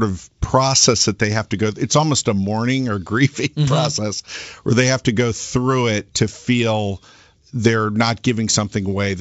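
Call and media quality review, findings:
Bit errors on an ADPCM link: pop and short rough burst with a level wobble, 6.28 to 6.37 s, right after "go through it to". Probably the G.722 link. Flipped bits knock the decoder's step size and predictor off, so each hit rings on for some milliseconds. Sounds like a low error rate hitting a few frames. The call runs over G.722 wideband coding, with the upper band open toward 7 kHz.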